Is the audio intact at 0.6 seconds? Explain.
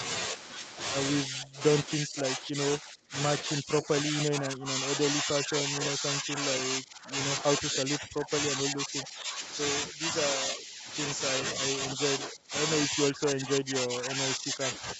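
Yes, the speech at 0.6 seconds is intact, with no fault at that moment.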